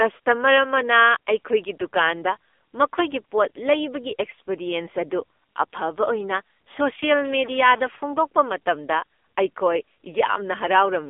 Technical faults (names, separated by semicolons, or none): AMR narrowband mobile codec